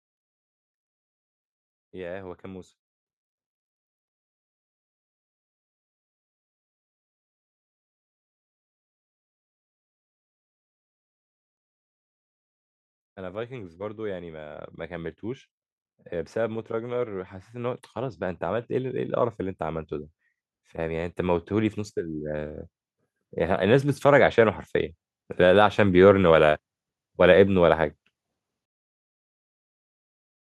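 From 13.14 to 15.51 s the level climbs by about 5 dB, then from 16.09 to 21.81 s by about 9 dB more: automatic gain rising, with the gain control judging the input too quiet and pushing its gain up step by step. The background noise swells along with the speech, which separates it from a speaker moving closer. The slow rise over seconds, not a quick duck and recovery around loud syllables, separates it from compressor pumping.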